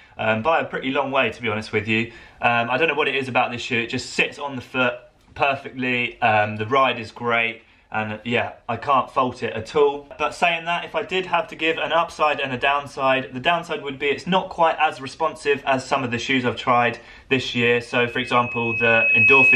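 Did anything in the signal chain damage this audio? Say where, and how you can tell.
Yes. A loudspeaker feedback squeal appears in the analogue acoustic loop from 17.89 s to the end at 19.55 s. A pure 2.6 kHz tone swells over about a second and a half to around 10 dB above the sound. The microphone is re-amplifying its own loudspeaker until the loop runs away.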